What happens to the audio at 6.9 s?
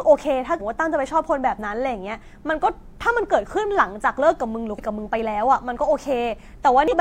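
From 6.88 to 6.94 s, damaged data in the compressed stream makes the decoder misread those frames and lose sync while hunting for the next valid header, producing a brief chirp, squawk, click or short hole. A spectrogram shows a short broadband smear; the waveform shows an abrupt discontinuity.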